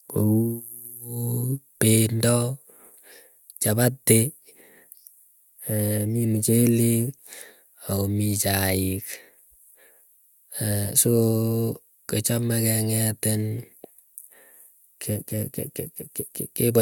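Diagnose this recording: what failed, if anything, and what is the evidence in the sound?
Nothing in the recording stood out as a fault on listening, so there is no failed stage to point to.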